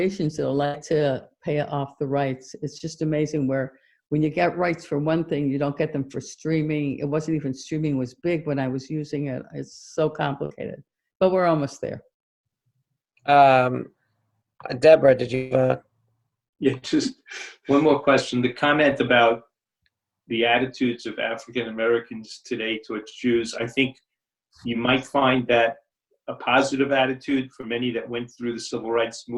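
At 0.65 to 0.76 s there is a burst of packet loss. About 80 ms of audio failed to arrive in time, and the receiver filled the gap by extending the last sound for roughly 80 ms while lowering its level. A voiced sound turns into a brief held buzz, and unvoiced material into a fading hiss. The signal then picks up further along, and the material that was lost is simply absent.

At 2.78 to 2.82 s a short concealed packet loss covers about 20 ms. The decoder bridged the hole by continuing the preceding sound, either from its pitch or as shaped noise, and then crossfaded back into the real signal. The result is a quick smear or wobble rather than an obvious gap.

At 10.46 to 10.61 s a second burst of packet loss drops about 40 ms. Concealment runs for roughly 47 ms as a fading continuation. Around 12 ms more of the signal is skipped when playback realigns.

At 15.35 to 15.53 s about 160 ms of audio is missing, most likely from a long network dropout. 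The receiver covers nearly all of it with a decaying buzz or hiss and does not fall to silence. The sound then resumes without the lost portion.

At 27.61 to 27.65 s another short concealed packet loss of about 20 ms behaves like the one at 2.78 s, producing a brief wobble where the filled-in signal blends back into the real audio.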